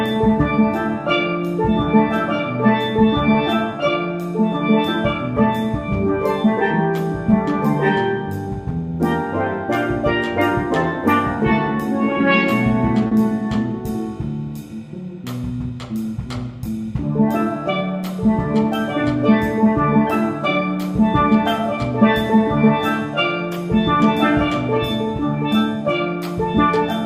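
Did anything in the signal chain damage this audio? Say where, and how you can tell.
Yes. In the network stage, 40 ms of audio missed the decoder's deadline, a short concealed packet loss from 13.07 to 13.13 s. The receiver stretched the preceding sound across the gap, so the moment carries a brief smear or wobble before the real audio resumes.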